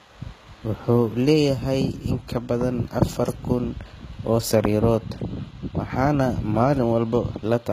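From start to finish the speech carries HE-AAC compression, likely from a low-rate encode around 20 kbps, and the damage is plainly audible. The upper band is synthesised from copied lower bands, so s sounds come out gritty and lispy. Nothing sits above 14.9 kHz. A spectrogram shows a hard ceiling there, with blocky, repeated patterns in the treble that don't line up with the harmonics below the crossover.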